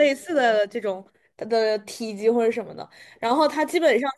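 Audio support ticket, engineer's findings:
Signal path checked on the speech capture with no technical faults found anywhere in the recording.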